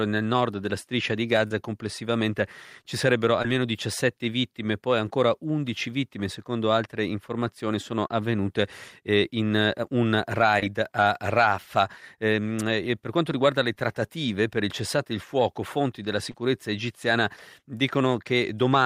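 Short concealed packet loss strikes at 1.47, 3.42, 8.07, 10.60, 13.75 and 16.31 s. Each time, 10 to 30 ms of speech arrived too late, and the receiver filled the gap by extending the preceding sound. The result is a brief smear or wobble, not the silent hole of an unconcealed dropout.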